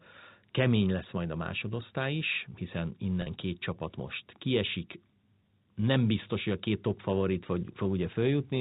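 At 3.22 to 3.26 s, a packet loss with pitch repetition drops about 40 ms of speech, which fits two 20 ms packets. The receiver bridges the gap by repeating the last pitch period, so the sound briefly holds with a slightly buzzy, sustained quality before speech resumes, all within the 4 kHz band of the G.711 telephone coding.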